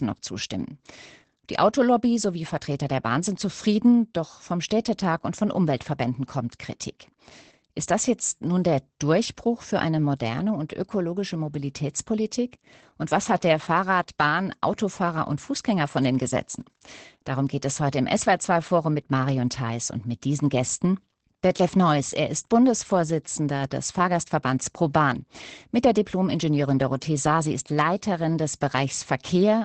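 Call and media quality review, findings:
Opus voice compression, whole clip: SILK linear-prediction coding at a low rate, consistent with about 12 kbps in 20 ms frames. Band stops near 8.6 kHz; coarse excitation leaves speech plainly muffled, hoarse, faintly robotic.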